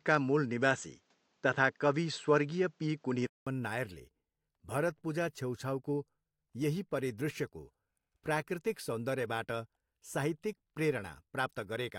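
From 0 to 3.47 s the speech sounds dull, with nothing above 8 kHz, its own faint background noise and a level about 5 dB off. A 200 ms gap follows, then clear sound. Noise and level shift with bandwidth, so this is likely an input switched to a poorer device, not a filter.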